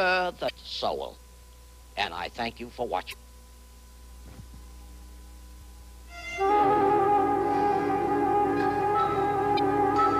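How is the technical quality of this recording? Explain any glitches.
The recording has four short glitches from damaged data in a compressed stream, at 0.46–0.51 s, 3.10–3.14 s, 5.58–5.62 s and 9.55–9.59 s. Each is a quick chirp or blip of about 35–50 ms, where corrupted bytes made the decoder misread frames and lose sync until it found a clean frame header.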